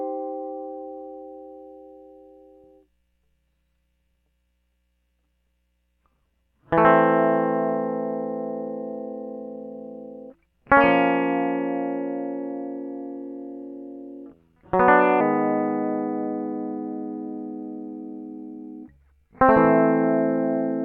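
From 15.21 s to the end of the clip, the music falls into a section at the wrong speed, running at 0.84 times its normal rate. Tempo slows and pitch drops together by about three semitones, likely from playback against a mismatched sample clock.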